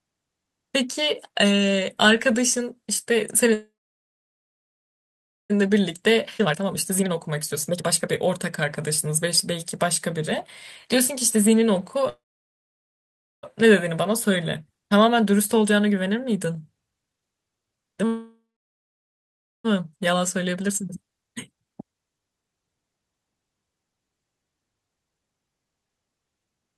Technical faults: call audio freeze; jitter buffer speed-up; skip ahead

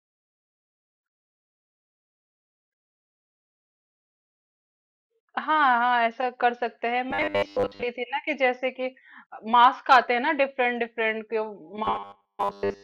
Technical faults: robotic sound from repeated short buffers

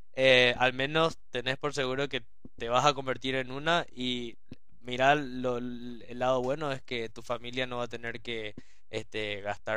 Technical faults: DC offset

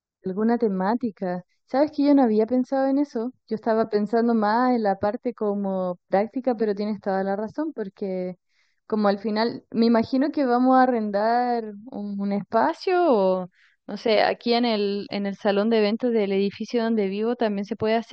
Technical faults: channel delay (comb filtering)

